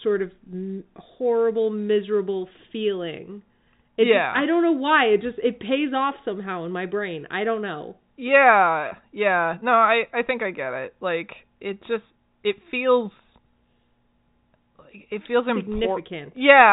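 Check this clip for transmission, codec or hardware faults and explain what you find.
No faults show up on checking this clip.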